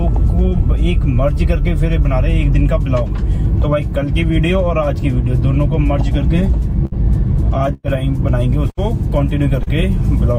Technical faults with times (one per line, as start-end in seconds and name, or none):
6.85-6.93 burst of packet loss
7.73-7.86 burst of packet loss
8.70-8.79 burst of packet loss
9.63-9.68 short concealed packet loss